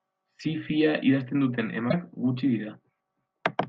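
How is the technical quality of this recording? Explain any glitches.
There's one real glitch to flag in this speech recording. From about 1.87 to 1.94 s there's a short burst of damaged data in a compressed stream. Some of the encoded bytes there came through wrong, so the decoder misread those frames, lost its sync and had to hunt for the next valid frame header before it could carry on. What you hear is a quick glitch, roughly 70 ms long, cutting through the speech.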